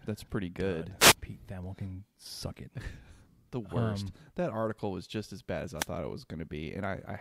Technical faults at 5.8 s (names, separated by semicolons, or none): wireless microphone noise hit